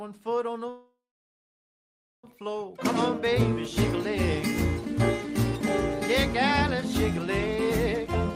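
Delayed packets likely drained the jitter buffer, causing a call audio freeze from 0.69 to 2.25 s: the last sound fades out, 1.27 s of silence follows, then playback resumes with nothing lost.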